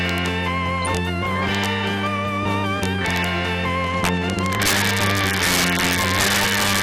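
Integer overflow runs through the whole clip. Loud peaks, pushed about 7 dB past the integer limit, wrap to the opposite sign and snap across the full range as harsh cracks.

Also throughout, the sound is dull and gurgling, with upper bands flickering out and a granular edge. This is likely MP2 compression at a rate consistent with 80 kbps.

DAB burbling appears from 0.78 to 1.00 s. Reception bit errors slip past correction into the audio data, putting short blips of noise into single sub-bands.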